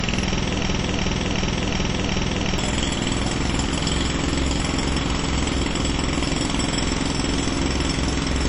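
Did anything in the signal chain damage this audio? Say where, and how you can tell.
Yes. At the codec stage, the recording of everyday sounds has likely passed through WMA compression at a low rate; the damage fits a bitrate around 32 kbps. The transform encoder spreads its quantisation noise over long blocks, so transients ring and smear into a washy haze, and a hiss rises and falls with the material. Weak detail has been zeroed, and nothing remains above 10.1 kHz, leaving the top end dull and cut off.

A broken-record loop at playback or in the stream runs from 0.63 s to 2.58 s. The stage likely stalled and kept resending the last fragment it held. A slice of about 368 ms repeats exactly, back to back, five times. The identical repetitions give it away: the same sound returns each time with the same timing and texture. The audio that belonged in those two seconds never arrives and is simply lost.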